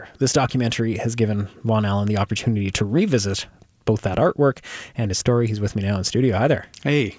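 Nothing is technically wrong with this audio.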